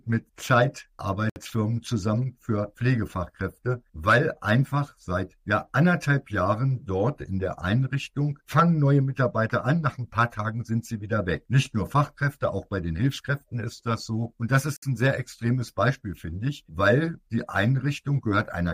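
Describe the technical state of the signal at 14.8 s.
At 14.77 to 14.83 s a 60 ms block of digital silence cuts in: the sound drops out to silence with no fade, unlike a softened dropout.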